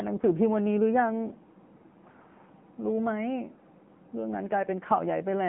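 From start to end, the speech carries AMR narrowband mobile codec damage. Nothing passes above 3.5 kHz or below about 150 Hz, and the voice sounds plainly buzzy and synthetic. This fits a low-rate AMR-NB mode near 8 kbps, which rebuilds speech from a vocal-tract model.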